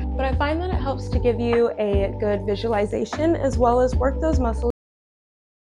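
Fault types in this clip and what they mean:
Cut-off end: at 4.70 s the sound stops abruptly in mid-flow, with no fade or natural decay, and the last 1.01 s of the clip, running to its end, is flat digital silence. The final stretch of audio data was never written out or played, so playback simply ran out of material partway through a sound rather than reaching a proper ending. The result is an instant drop from signal to nothing, the hallmark of a truncated recording.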